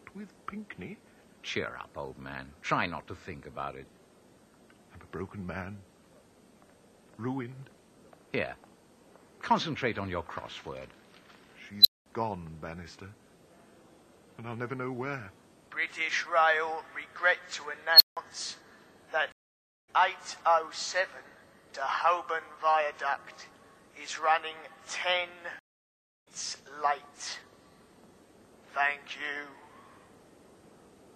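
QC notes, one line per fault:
11.81–12.06 s and 17.93–18.17 s, unstable filter: a high squeal, roughly 4 kHz, swells to full loudness in 40 ms the first time and 72 ms the second, clips, then drops into silence of about 0.21 s and 0.17 s. A recursive filter running with bad coefficients feeds its own output back with gain above unity, so the tone grows until the values overflow and the output goes dead until the filter resets.
19.32–19.89 s and 25.59–26.28 s, stream reconnect: the audio stops for 0.56 s, then 0.67 s, and each time picks up later than where it broke off, skipping roughly a third of a second and then nearly three-quarters of a second. The connection dropped, the player reconnected and started a fresh decoder mid-stream, so the gap covers the outage and the content that played on without it.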